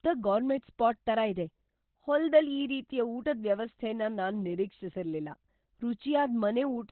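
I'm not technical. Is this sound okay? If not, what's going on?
No, not really. From start to finish the speech sounds muffled and hoarse, like an old phone line. Nothing comes through above about 4.2 kHz, so the crisp edges of consonants are gone and everything sounds dull. This is most likely heavy Opus compression: squeezed this hard, the encoder switches to its speech mode, which keeps only the low part of the sound and drops the rest.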